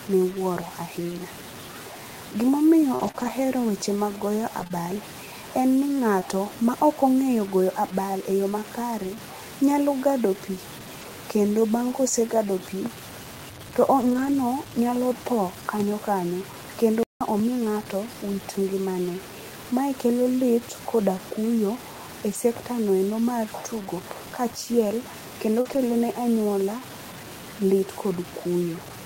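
The whole recording appears to have been reduced to something like 6-bit resolution by truncation, with no dither: low bit depth without dither is the likely cause. Because the rounding error tracks the signal instead of being randomised, it becomes distortion rather than a steady hiss, sitting only about 20 dB below the sound. Quiet passages turn gritty and the faintest moments sputter or collapse to silence, with a grain that changes along with the audio.

From 2.95 to 6.23 s, scattered short gaps appear. Roughly five separate packets went missing or arrived late, the longest gap around 40 ms. Each time, the receiver extended the last stretch of sound to cover the hole, patching roughly 100 ms in total, about 4% of that span. The audio stays largely clear, but small ticks, smears and hiccups dot this section.

At 11.01 s, just before "kendo bang ka osegado", a single lost packet was rebuilt from error correction. 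The following packet carried a low-bitrate copy of it, so nothing drops out. But that 20 ms rebuilt frame is coarser and noisier than its neighbours. At 14.01 to 14.35 s the same repair covers nine separate lost packets, giving about 180 ms of rougher, noisier sound. The same repair recurs at 22.33 s for another 20 ms.

At 17.03 s, right after "tho kanyo kanyo kendo", the output goes silent for about 177 ms before resuming. This is a playback stall: the player most likely ran out of data or had its thread blocked, so the sound halts in mid-flow and picks up again only after it recovers.

At 25.61 to 25.67 s, between "mar tugo kachiel kendo" and "ne anyuola", is a short concealed packet loss. About 40 ms never reached the decoder in time, and the receiver synthesised roughly 38 ms from the preceding sound before blending back. This is heard as a brief smear or wobble. It runs straight into another error-correction rebuild from 25.65 to 25.79 s, where about 80 ms of recovered low-bitrate copies add further roughness and noise.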